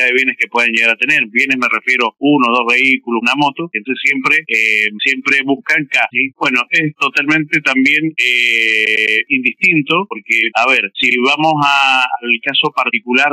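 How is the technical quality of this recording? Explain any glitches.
The recording has two stutters caused by repeated frames. From 8.84 to 9.16 s, a block of about 105 ms plays three extra times, which fits a run of four compressed frames being written again. From 11.09 to 11.14 s, a block of about 52 ms repeats once. Because the decoder replays identical data, the sound loops briefly. The playback runs about 0.37 s longer as a result.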